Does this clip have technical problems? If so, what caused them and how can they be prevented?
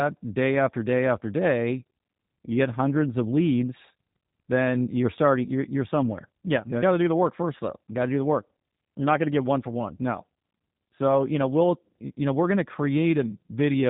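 Yes. The speech runs through the G.729 codec for the whole clip, and the damage is plainly audible. Nothing above 3.8 kHz survives, and the voice has a rough, slightly synthetic buzz, which fits a low-rate 8 kbit/s VoIP coder that rebuilds each short frame from a vocal-tract filter, a pitch predictor and a few pulses rather than sending the waveform itself. A simple band limit would only sound dull; this coder also adds that buzzy texture. To prevent it, record locally or negotiate a wideband codec such as Opus instead of G.729.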